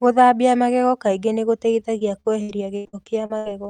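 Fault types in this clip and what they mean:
Repeated packet loss (robotic sound): from 1.79 to 3.51 s the speech keeps dropping out in eight short holes, the longest 79 ms, each patched by stretching the last sound forward, so about a quarter of that span comes out choppy.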